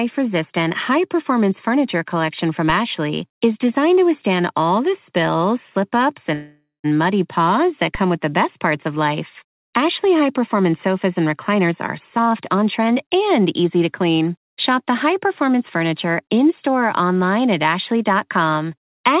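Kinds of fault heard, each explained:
Call audio freeze: from 6.34 to 6.86 s the speech stalls, likely from delayed packets emptying the jitter buffer; the last sound trails off, with about 140 ms of silence.
DC step: at 7.95 s the waveform's zero line jumps and then decays away, heard as a brief low thump while the speech continues unchanged.
Jitter buffer speed-up: surplus buffered audio is trimmed by cutting pitch periods, so speech runs 138% fast briefly near 11.6 s, then 121% from 12.16 to 14.26 s, at unchanged pitch.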